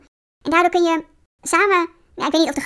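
From start to finish, the speech plays with a wrong sample rate. The samples seem to have been recorded at 16 kHz and played at 24 kHz, with no conversion between the two. Everything runs 1.5 times too fast. Pitch rises by the same ratio, about 7 semitones. Speed and pitch shift together. The voice sounds high, thin and hurried. The fault never stops or changes, so the whole clip has this chipmunk quality.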